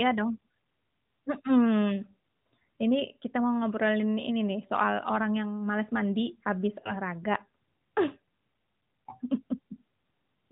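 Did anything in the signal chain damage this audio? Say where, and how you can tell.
Yes. Lost AMR speech frames, a radio-link fault, damage the speech at 6.80–6.93 s. The sound drawn out and sagging for about 40 ms fits two 20 ms frames, which the decoder patched by repeating the last good pitch and vocal-tract settings at falling gain. A spectrogram shows frozen, fading harmonics, and the waveform envelope shrinks before recovering.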